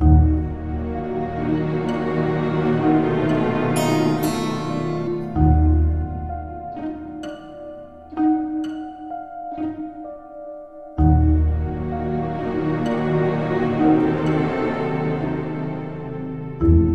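At 5.06 s, part of the compressed stream arrives damaged, so the decoder misreads that frame, loses sync and hunts for the next valid header. This damaged data in the compressed stream surfaces as a brief glitch lasting about 14 milliseconds.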